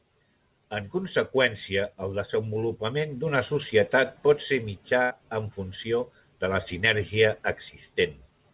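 Speech, carried over a narrowband call path with nothing above 4 kHz, consistent with G.711 mu-law at 64 kbps. At 5.02 s there is a burst of packet loss. The sound stops being real for about 90 ms, until 5.11 s. The receiver covers the hole by stretching the last sound and fading it. This gives a short held buzz or hiss. Then the audio resumes further along, with that stretch missing.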